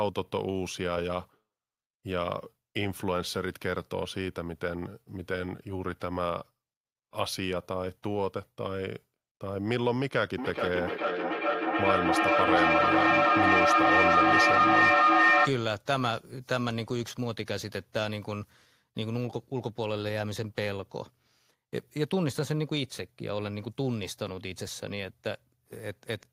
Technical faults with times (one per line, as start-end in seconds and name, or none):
10.38-15.60 feedback echo between two devices